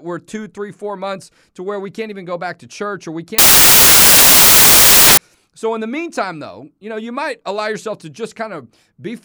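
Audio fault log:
3.38 to 5.17 s, samples built from the wrong bytes: right after "to church or we", about 1.8 s of the speech turns into loud, broadband hiss until "so in the meantime" returns cleanly. Each sample is being assembled with its bytes misaligned or swapped, so the rapidly fluctuating low-order bits land in the most significant position. The result is a noise-like signal at high level.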